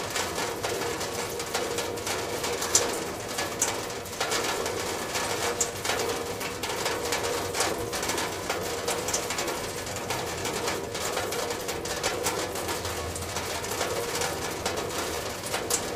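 Clock drift between sender and receiver runs through the whole recording of everyday sounds. The sending device's clock runs roughly 4% slower than the receiving one's, so audio arrives a little more slowly than it is played out. The jitter buffer keeps draining, and the receiver has to make up the shortfall again and again. The result is an unsteady, faintly dragging flow rather than a single audible event.

Repeated timing corrections run from 0.09 s to the end of the clip. These are how the receiver copes with the slow sender. It keeps repeating short pieces of audio to fill the gaps, so the effective playback rate is 96% and the clip is stretched by about half a second overall. The corrections all lengthen the sound, but they fall at uneven intervals, giving slight hiccups and a wavering tempo.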